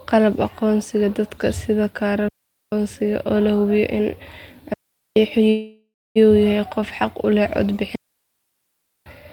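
At 2.28 s the speech drops into a clean hole of near silence for about 0.44 s, and again at 4.74 s for about 0.43 s. That's a digital wireless dropout: the link lost too much data, so the receiver muted with a quick fade and no noise burst on either side.

From 5.49 to 6.18 s there's a call audio freeze. The last sound hangs on as a fading buzz or hiss, then about 0.27 s of silence, then the speech carries on where it left off. Nothing is skipped, but everything after lands about 0.66 s later. The likely cause is delayed packets draining the jitter buffer.

At 7.95 s another digital wireless dropout mutes the speech for about 1.1 s, up to 9.06 s.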